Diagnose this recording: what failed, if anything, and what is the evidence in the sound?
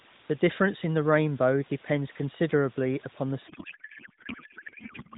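At the codec stage, the receiver unpacks the AMR-NB payload in the wrong layout, a codec payload misread that fits octet-aligned frames being parsed as bandwidth-efficient. From 3.48 s to the end, the narrowband speech collapses into garbled noise and warble that barely tracks it.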